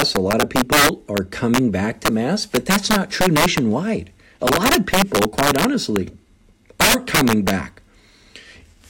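Throughout the speech, integer overflow corrupts the signal: the gain stage drives the audio about 8 dB past the largest value the integer format can hold, and instead of being held at the limit, samples that exceed it wrap around to the opposite extreme. Only around two percent of samples go over, so the damage lands on the loudest peaks, where each one snaps across the full range and produces a violent crack, far harsher than ordinary clipping.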